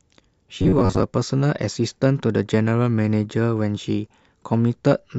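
From 0.60 to 1.03 s the speech turns into a rigid, metallic buzz near 94 Hz, robotic sound likely from repeating 10.7 ms buffers, roughly half the audio replaced.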